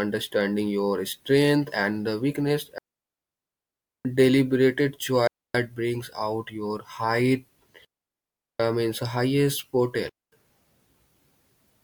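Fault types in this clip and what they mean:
digital wireless dropout: the radio link lost too much data, so the receiver muted, leaving four clean near-silent holes of 0.23 to 1.27 seconds with no noise bursts.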